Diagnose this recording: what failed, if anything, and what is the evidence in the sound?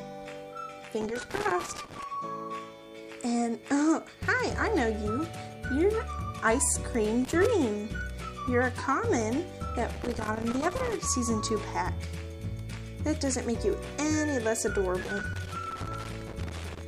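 Loose connector crackle in the analogue wiring: a worn or dirty contact was making and breaking, chopping the signal and popping on any DC present. Irregular scratchy bursts appear at 1.01–2.03 s, 7.25–7.46 s, 9.94–10.96 s and 15.01–16.81 s.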